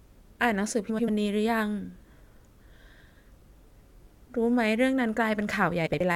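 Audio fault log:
0.89–1.09 s and 5.86–6.01 s: frames out of order. In each stretch, two neighbouring runs of frames arrived swapped and were decoded that way. The halves play exchanged: two blocks of about 93 ms in the first, about 70 ms in the second. The block sizes fit runs of four and three frames. The sound turns briefly into a garbled flutter. No time is lost.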